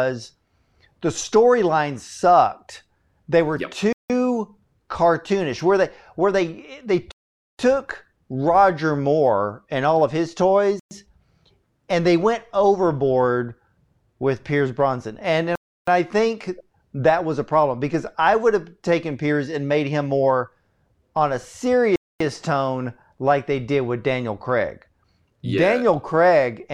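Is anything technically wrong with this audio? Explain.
Yes. The speech drops to silence five times: at 3.93 s after "were yep" (about 0.17 s), at 7.12 s after "they where they they" (0.47 s), at 10.80 s (0.12 s), at 15.55 s just before "I think that was" (0.32 s), and at 21.96 s (0.25 s). These are Bluetooth stalls. Interference likely held back the wireless packets. The headphones' buffer emptied, and playback froze until the resent data arrived. Each time the audio cuts out cleanly and then resumes.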